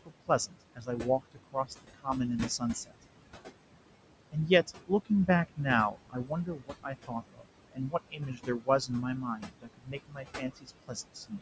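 Noise suppressor artifacts run through the whole clip. The room noise sinks by about 21 dB between phrases, then rises again under the speech.

Speech cut by the noise suppressor occurs at 0.05 to 2.08 s, 2.58 to 3.04 s, 4.32 to 5.6 s, and 5.91 s to the end. Quiet parts were mistaken for noise and dropped by about 20 dB. They sound swallowed.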